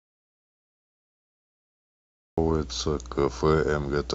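From the very start until 2.38 s the clip is dead silent, with no room tone at all, before the speech cuts in mid-flow. This is an audio dropout to silence, likely a lost input while the recorder kept writing zeros.

Throughout the clip, a steady low drone sits under the speech, pitched at 60 Hz with some low harmonics and fairly prominent, roughly 15 dB below the speech. This is mains hum, where a ground loop or nearby transformer leaks the power line into the signal.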